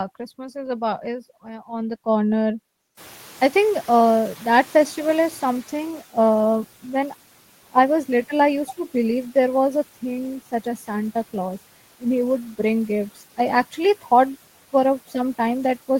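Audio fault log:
2.97–6.03 s, noise suppressor catching up: the room noise jumps by about 20 dB right around 3 s, and the suppressor's noise estimate trails behind it, so the noise comes through fairly raw at first and then sinks by about 9 dB over roughly 3 seconds as the estimate adapts, settling about 25 dB under the speech.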